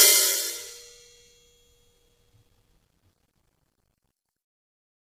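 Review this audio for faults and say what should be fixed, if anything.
Low-delay AAC compression affects the whole clip. The music sounds rough and grainy. Noise fills the gaps between the harmonics, and pitched sounds lose definition. Nothing is present above 15.6 kHz. The cause is likely AAC-ELD, the low-delay codec used for calls. Its short frames separate harmonics poorly and spend bits fast. The heavy damage fits a bitrate near 24 kbps. To prevent it, send music with a higher bitrate or a full-delay codec.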